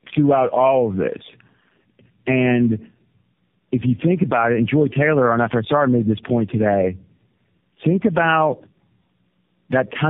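Throughout the clip, the speech carries tandem speech coding damage. The sound points to three low-rate speech codecs in a row, consistent with G.729A and then AMR-NB twice, joined by G.711 links. At each border the signal was decoded and coded again. Each coder worked on the previous coder's errors. Nothing reaches above 3.7 kHz, so the speech is muffled. It also sounds rough and warbly, worse than any single codec would make it.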